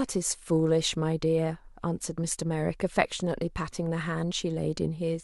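Nothing here trips any alarm: the speech runs along without a single technical fault turning up at any point in the clip.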